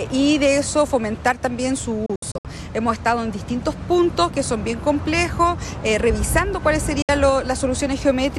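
Around 2.06 to 2.45 s there's a digital broadcast dropout. Bad frames made the receiver mute in quick 3 ms fades, leaving short holes (longest 64 ms) scattered across that stretch. At 7.02 s a single 64 ms gap appears, and the missing sound never comes back.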